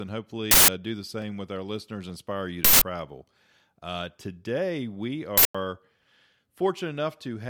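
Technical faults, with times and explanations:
0.51–0.68 s, 2.65–2.82 s and 5.38–5.55 s (the last one right after "today we"), uninitialised buffer: three loud bursts of digital noise, each about 0.17 s long. A buffer went out before any audio was written into it, so leftover memory played as samples. The length fits an 8192-sample block.
1.22 s, 2.10 s and 3.67 s, dropped samples: three single sharp clicks. The first sits between "do the" and "with our listeners", and the second comes just after "with our listeners". Each is likely a tiny run of missing samples, well under a millisecond, so the waveform jumps straight to a later value.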